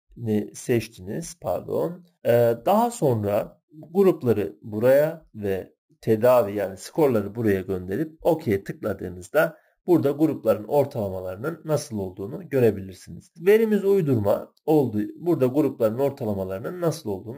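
Throughout the clip a bright, metallic fizz rides on the sound and follows its level, about 25 dB down, between 8 and 16 kHz. This is imaging from sample-and-hold upsampling: each sample was held without smoothing, mirroring the spectrum, which fits a 16 kHz source raised to 44.1 kHz.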